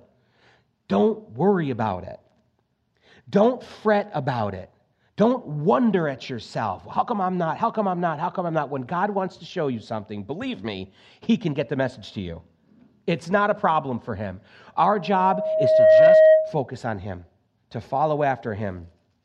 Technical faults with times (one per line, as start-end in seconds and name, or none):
14.92-16.62 loudspeaker feedback squeal